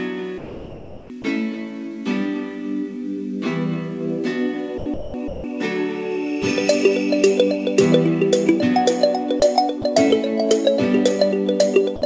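A voice detector at the sending end likely misjudged parts of the sound as background and stopped transmitting, so the receiver filled those stretches with comfort noise. This sound dropped by the voice detector occurs at 0.38–1.10 s, 1.22–1.24 s, 4.78–4.86 s, 4.94–5.14 s, 5.28–5.44 s, 9.40–9.42 s, 9.82–9.84 s and 11.96–12.02 s. Each time the sound gives way to steady noise or near silence and returns when the detector triggers again. The longest gap is over 0.7 s, near the start. The cluster around 5 s chops the audio into fragments, and the brief ones are tiny clipped holes. Throughout, nothing is heard above 8 kHz, which fits a G.722 call codec at 64 kbps.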